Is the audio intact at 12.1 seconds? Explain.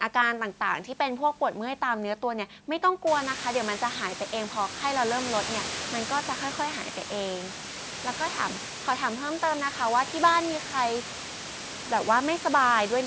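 Yes, the speech at 12.1 seconds is intact, with no technical fault at that moment.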